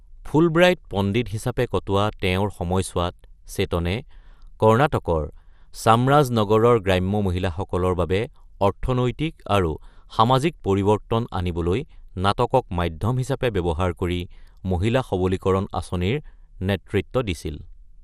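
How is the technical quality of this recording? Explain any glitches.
The technical quality is compromised by MP2 compression, which is plainly audible throughout the speech. Nothing is present above 14.4 kHz, and the remaining sound carries a gurgling, granular roughness. The likely cause is MPEG Layer II coding at a low rate, consistent with about 80 kbps. The encoder divides the spectrum into 32 equal sub-bands and, short of bits, drops upper bands and coarsely quantises the rest. Unlike a simple low-pass filter, the bands flicker and the distortion is grainy rather than just dull.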